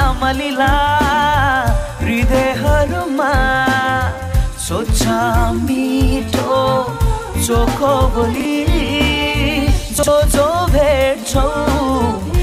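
At 8.36 to 8.45 s and again at 9.99 to 10.08 s there are chunks out of order: a roughly 46 ms block lands one slot late, swapping places with its neighbour. Nothing goes missing, but you get a quick jumbled stutter at the hard joins.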